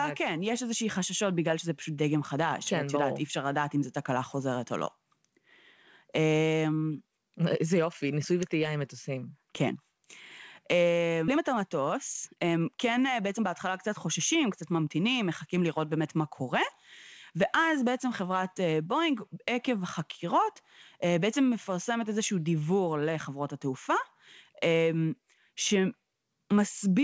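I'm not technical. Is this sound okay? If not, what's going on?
No, there are two problems in this speech recording, both just past the 11-second mark.

Skip ahead, at 11.28 s: about a second of speech is simply gone. A chunk of audio was dropped, either on the way or by the call software when too much had piled up, while newer audio was already waiting. Nothing is put in its place, so the speech on either side is joined almost directly and playback seems to leap forward.

Jitter buffer speed-up, from 11.34 to 15.96 s: right after that jump, the speech runs about 13% faster than normal. The receiving end still had more audio stored than it wanted, so over these four-and-a-half seconds it kept snipping out tiny slivers, each only a fraction of a syllable, removing roughly half a second in total. The pitch stays the same, but the talking sounds rushed until it settles back to normal speed.

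Throughout, the call connection passes nothing above 8 kHz, so the very highest frequencies are absent.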